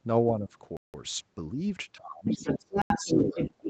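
From 0.37 to 0.54 s the speech dips by around 10 dB for roughly 150 ms before recovering. This is speech suppressed in double talk: the echo canceller likely could not separate near-end talk from the far end's echo on its own loudspeaker and turned the near-end signal down along with it.

At 0.77 s the sound cuts abruptly to dead silence for 171 ms, returning at 0.94 s. That is a block of digital silence, where the output samples were zeros rather than audio. The length fits a missed 8192-sample buffer that was never filled in time.

From 1.86 s to the end, the speech is pushed down much harder, by roughly 25 dB at its deepest. This is the same double-talk suppression, likely triggered again by the far side speaking.

From 2.25 s onward a second voice comes through at about the same level as the talker. This is the other side's voice leaking through: the loudspeaker playback reached the microphone, and the echo canceller likely failed to subtract it.

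A second block of digital silence falls inside this stretch, at 2.82 to 2.90 s. It is an 85 ms hole, consistent with a 4096-sample buffer left empty. Throughout, the audio stops at 8 kHz, as expected for an Opus call at this bitrate.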